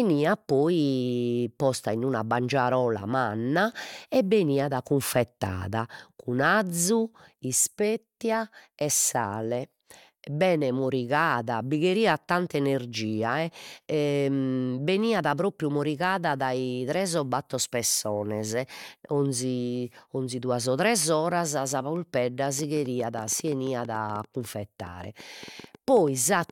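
From 22.59 s to 26.51 s, something in the chain keeps injecting short pulses, most likely interference from nearby equipment or a faulty connection or power supply. The result is a train of clicks: about thirty near-identical ticks at roughly 7.7 per second, spaced unevenly, and reaching about the same level as the speech itself. They pop through the talking and stay audible in the pauses, running right up to the end of the clip.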